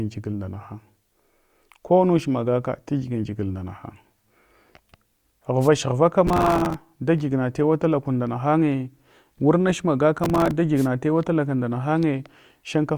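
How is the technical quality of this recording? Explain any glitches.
The speech recording has two kinds of glitch, each occurring twice.

Wireless microphone noise hits occur at 5.61 to 5.68 s and at 10.76 to 10.87 s, the second just before "tuwa talaka nda". Each is a brief swish of static. The analogue FM radio link faded as reflections cancelled, and the receiver's hiss rose over the voice. On a spectrogram, each shows as a short broadband noise smear. In the waveform, the noise fills in around the speech.

Processor overload crackle occurs at 6.27 to 6.74 s, ending just before "dagiyigma tewa tala kun", and again at 10.24 to 10.51 s. The processor missed many buffer deadlines in a row, and each miss replayed a scrap of old audio with hard edges. The spacing fits a buffer of roughly 3 ms. This produces gritty tearing that stops once the load eases. The waveform shows jagged discontinuities, and the spectrogram shows dense vertical click lines.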